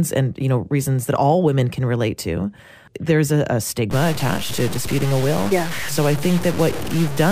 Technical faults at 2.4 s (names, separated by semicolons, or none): none